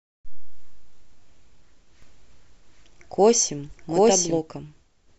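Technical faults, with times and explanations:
2.02–4.38 s, doubled audio track: a second full-band copy of the speech runs about 0.7 s behind the original and at roughly the same loudness, so each stretch of speech is heard again while the next is already playing. The copy has no decay or room colour, which rules out an acoustic echo, and it switches in and out abruptly at both ends. The likely cause is the signal being captured a second time through a slower path, or an edit leaving two misaligned copies.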